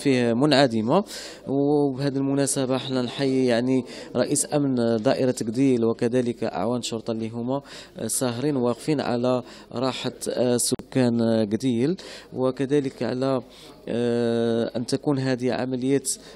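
At 10.75 s the sound drops out to silence. The gap lasts about 47 ms and ends at 10.79 s, when the sound returns. It is a short, clean hole rather than a fade. This is likely a Bluetooth stall. Radio interference would have delayed packets on the wireless link. The receiving buffer then emptied, so playback had nothing to play. It paused until the resent data arrived and filled the buffer again.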